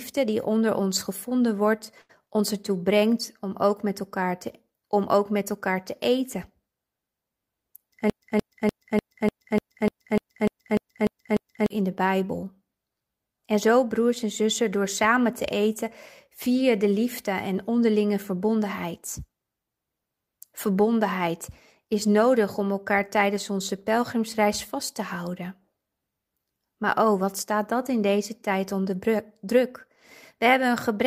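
At 2.01 to 2.23 s, after "onder ons gevonden wordt", a burst of packet loss cuts in. About 76 ms is filled by the receiver stretching the last sound and fading it down, then about 80 ms of speech is simply absent before "ons ertoe brengt om".

From 8.10 to 11.70 s the audio falls into a broken-record loop. A 0.30 s fragment plays back to back twelve times, identical each pass, likely because the stream stalled and kept resending its last buffer. The speech due in those 3.6 s never arrives.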